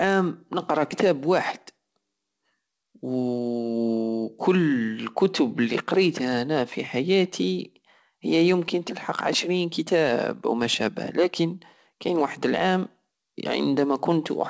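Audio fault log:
No faults found; the speech comes over a normally working WebRTC call path using G.722 at 64 kbps, which leaves nothing above 8 kHz.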